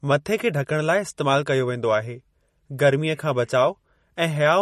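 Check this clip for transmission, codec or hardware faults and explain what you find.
One codec fault runs through the whole speech clip: MP3 compression, likely at a low bitrate near 40 kbps. Short of bits, the encoder cuts everything above 13.6 kHz and switches weak frequency lines on and off, giving a plainly audible watery swirl that simple low-pass filtering never adds.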